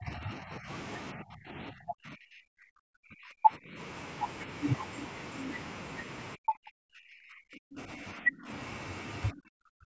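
Speech that dips and breaks up from 0 to 0.69 s, 1.13 to 3.79 s, 6.35 to 8.5 s and 9.31 to 9.88 s, likely speech suppressed in double talk: the echo canceller ducks its own talker while the far side speaks. The first dip is shallow. The others nearly silence the speech. The waveform shows collapsed, ragged envelopes, and the spectrogram shows faded or blank columns beneath an 8 kHz ceiling.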